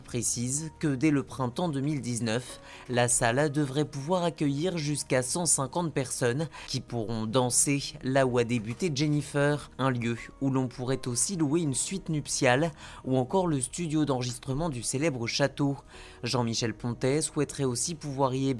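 Nothing in the audio stands out as a technical fault, so there's really nothing to flag here.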